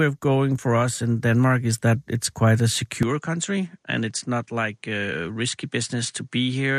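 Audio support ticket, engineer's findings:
From 3.03 s, right after "that it's quite a", sound goes duller and about 5 dB quieter, nothing above 10.5 kHz, new faint background noise, no gap. Likely input switched to a poorer device.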